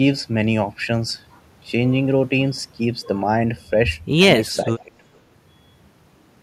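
From 4.81 to 4.92 s, the speech briefly sinks, by around 15 dB at its deepest, for about a tenth of a second. This is speech suppressed in double talk. The likely cause is an echo canceller mistaking overlapping talk for echo and ducking it.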